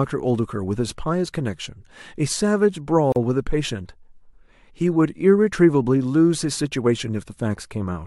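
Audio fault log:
3.12–3.16 s, gap at a join of encoded pieces: the speech breaks into a 38 ms gap with edges smeared by the codec, then carries on from where it stopped. Pieces encoded separately were joined untrimmed, leaving each run's start delay and last-frame padding in place.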